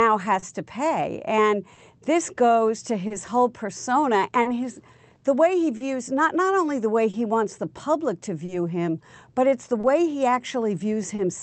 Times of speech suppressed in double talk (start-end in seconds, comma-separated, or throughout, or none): none